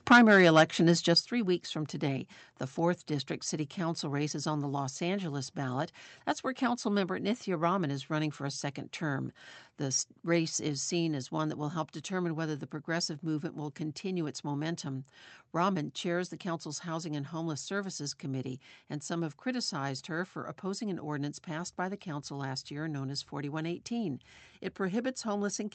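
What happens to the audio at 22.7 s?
Nothing goes wrong at 22.7 s: the speech runs on intact through that moment.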